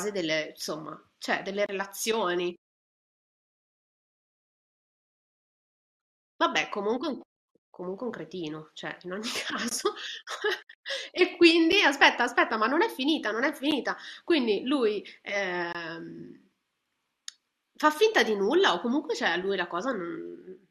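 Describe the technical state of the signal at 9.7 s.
At 9.69 to 9.71 s there is a gap between stream segments. Two adjacent pieces of the speech stream don't meet on the timeline, so the player fills the 20 ms hole with silence, heard as a brief hard dropout. Nothing is lost, but everything after it lands 20 ms later. On the waveform it appears as a flat line with abrupt edges, and on the spectrogram as a clean vertical band of empty space across all frequencies.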